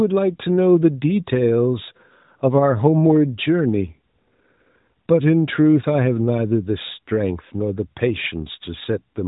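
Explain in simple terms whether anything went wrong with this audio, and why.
Nothing went wrong here: the speech comes through the way a normal mobile phone call would, carried by the AMR narrowband mobile codec at its top quality setting, which trims the sound only lightly, as that kind of phone line always does.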